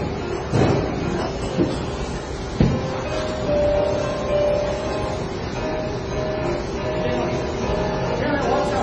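From start to finish, the sound shows likely transcoding between lossy codecs: low-rate MP3 artefacts re-encoded by HE-AAC, with nothing above 10.5 kHz surviving the chain.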